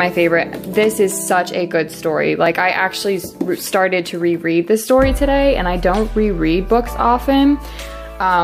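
A dropped buffer (overrun) occurs at 2.46 s: the audio jumps forward with no gap of silence, as if a sliver of sound were snipped out and the two ends butted together. Roughly 5 ms goes missing. The likely cause is the recording software failing to collect a block of samples before the hardware wrote over it, so that block was lost and playback skips straight to the next one.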